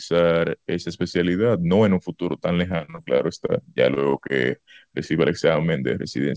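From 2.68 to 3.50 s the speech breaks up with repeated packet loss, giving a robotic sound. Audio keeps failing to arrive in time, in about nine separate gaps. The longest is 37 ms. Each gap is patched by stretching the sound just before it, and the next gap follows quickly. About a quarter of that stretch is filled in rather than real. The result is choppy, with fragments missing.

Three short concealed packet losses follow, at 3.94 to 3.98 s, 4.10 to 4.16 s and 4.28 to 4.31 s. In each, roughly 20 ms of audio failed to reach the decoder. The receiver filled the hole from the preceding sound and blended back into the real signal. Each one is heard as a brief smear or wobble. Above them the call path cuts everything over 8 kHz, which fits the G.722 codec.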